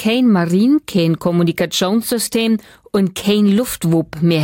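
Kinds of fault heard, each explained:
Bit error spike: A single sample, at 3.63 s, has had one bit flipped, so its value leaps by a power of two and snaps straight back. It is heard as one sharp, broadband tick, reaching about -14 dBFS. It bears no relation to the surrounding sound.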